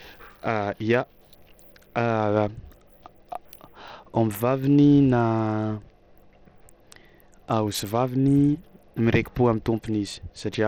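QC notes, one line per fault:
Throughout: Bluetooth SBC compression, plainly audible on the speech, likely from a low-bitrate link around 80 kbps. The thin bit pool starves the top sub-bands, so treble flickers and drops out under gritty quantisation noise. A spectrogram shows ragged, gapping high bands and speckled noise.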